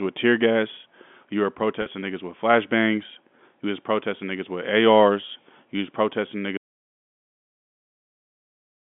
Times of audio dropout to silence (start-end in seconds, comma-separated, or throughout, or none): 6.57-8.80